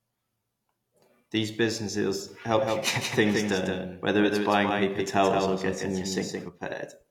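From 2.56 to 6.48 s there's a doubled audio track: a second, flat copy of the speech trails about 150 ms behind, roughly 5 dB down, kicking in and out abruptly. It's likely a slower second capture path or an edit holding two out-of-step copies.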